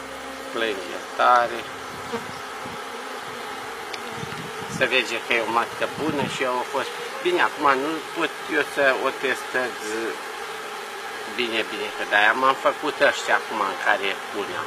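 Adaptive stream at a lower bitrate from 3.28 s onward: quality drops suddenly without a gap, nothing remains above 14.9 kHz, which fits a switch to a low-rate HE-AAC version.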